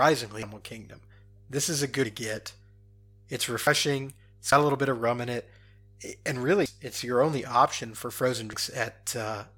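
A steady mains hum runs under the whole recording. It is a low tone at 50 Hz, sitting about 30 dB below the speech. Power-line current is leaking into the signal path, as from a ground loop or a transformer near the cabling. The hum never changes level. It is easiest to hear in the pauses, where nothing masks it.

Six sudden skips break up the speech. They fall at 0.43, 2.05, 3.67, 4.52, 6.66 and 8.53 s. Each is an abrupt jump forward. No silence is left behind. The likely cause is a dropped buffer (overrun): the capture side fell behind, and blocks of audio were overwritten before being read. The jumps at 0.43, 2.05 and 6.66 s lose around a third of a second. At 2.05 s the cut falls between "is a" and "to get". The one at 6.66 s lands just before "it's your only". The skips at 3.67 and 4.52 s are shorter, near a tenth of a second, and the second comes just before "a little bit of". The last, at 8.53 s, loses a little more than that.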